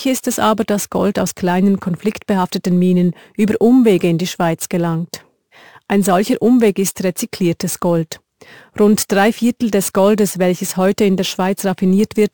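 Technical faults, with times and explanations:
Throughout: imaging from sample-and-hold upsampling. A bright metallic fizz rides on the speech and rises and falls with it, sitting about 22 dB below the signal in the 12 kHz to 24 kHz band. This points to audio raised from a 24 kHz rate by holding each sample with no smoothing filter, so mirror copies of the spectrum fold around 24 kHz and its multiples. The lowest copy therefore moves opposite to the speech's pitch.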